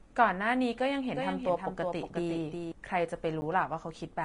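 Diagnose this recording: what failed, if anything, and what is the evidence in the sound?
Codec stage. Nothing survives above 10.6 kHz, and the treble sounds hissy and grainy throughout. Tones are roughened and attacks blurred. This points to likely Vorbis compression at a low bitrate, around 33 kbps, with fine treble detail quantised into noise.

Doubled audio track, from 1.16 s to 2.72 s. A full-band second copy trails the original by roughly 0.4 s, about 5 dB quieter. It has no decay or room colour. It starts and stops abruptly. Either a slower capture path or an edit holding two offset copies likely put it there.

Block of digital silence at 3.41 s, lasting 10 ms. At that length it is heard as a tick or dip rather than a gap. The audio cuts out and back with no fade. The output buffer was not filled in time, or a calculation produced invalid values.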